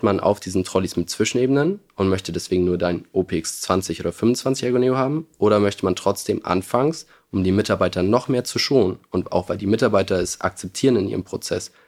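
No technical faults are audible.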